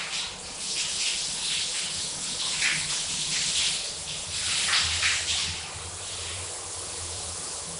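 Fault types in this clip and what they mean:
Nellymoser compression: The sound carries a rough, hissy halo and a smeared, underwater blur throughout, and nothing is present above 10.6 kHz. This is likely Flash's Nellymoser Asao codec, with the texture pointing to a rate of about 44 kbps. Its coarse fixed bit budget leaves weak bands empty and refills them with noise. That grainy noise fill separates it from a plain low-pass, which only dulls, and from MP3-style swirling.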